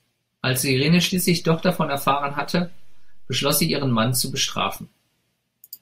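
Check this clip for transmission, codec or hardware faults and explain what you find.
There's one hardware-type fault, a DC step: at 1.2 s the waveform's zero line jumps by about -34 dBFS and holds until 4.76 s, giving a low thump at each edge while the speech carries on unchanged.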